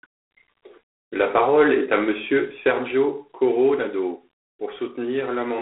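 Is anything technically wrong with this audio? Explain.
Yes. G.726 ADPCM coding runs throughout: with only about three bits per sample of prediction error, which fits 24 kbit/s, the speech carries a harsh rasping hiss that tracks its level, and nothing passes above 3.8 kHz.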